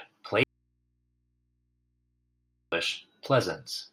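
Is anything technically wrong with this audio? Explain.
Yes. From 0.43 s to 2.72 s, about 2.29 s of the speech suffers an audio dropout to a faint residue. The likely cause is an interrupted feed into a still-live input, so only mains hum remains, roughly 45 dB down. Unlike a pause or fade, it cuts and returns abruptly.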